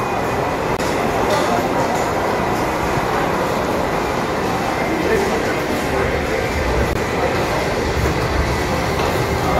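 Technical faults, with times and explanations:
0.77 to 0.80 s and 6.93 to 6.97 s, Bluetooth dropout: the sound cuts out sharply for about 21 ms each time, which fits a single lost frame. It's likely a late wireless packet the headphones discarded, so playback resumes further along, as if it had kept running.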